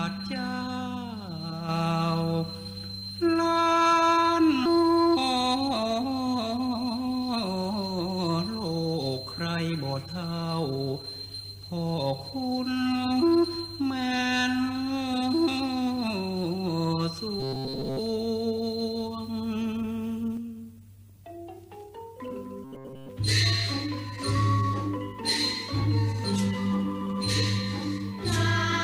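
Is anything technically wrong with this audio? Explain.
Yes. Skip ahead at 4.65 s: about a second of audio was dropped while later audio was queued, so playback jumps abruptly forward with no gap.

Jitter buffer speed-up from 4.75 to 8.29 s: the receiver trimmed many pitch-period slices, roughly a third of a second in total, so the sound runs 9% fast at unchanged pitch.

Robotic sound from repeated short buffers at 17.40–17.99 s and 22.64–23.09 s: a rigid metallic buzz at 133 Hz, likely from most of the audio being replaced by repeats of a stale buffer of about 7.5 ms.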